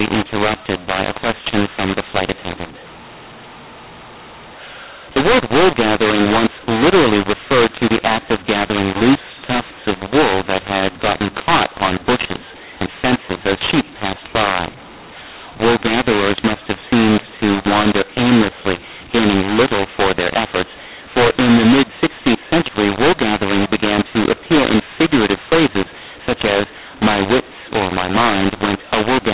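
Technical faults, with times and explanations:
Throughout, mu-law and A-law mixed up: A-law telephone coding was decoded as mu-law, scrambling sample levels, so the speech sounds harsh and distorted and pauses fill with noise.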